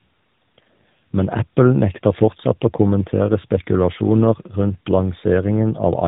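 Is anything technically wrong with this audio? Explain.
Yes. Throughout the clip there is tandem speech coding. The speech was decoded and re-encoded by two different low-rate speech codecs in a row, a pattern that points to a GSM full-rate leg followed by an AMR-NB leg at about 12.2 kbit/s, with a plain telephone-quality link between. The second coder had to model the first one's errors, so the speech sounds rougher, more muffled and more warbly than one codec alone would leave it, with nothing above 3.8 kHz.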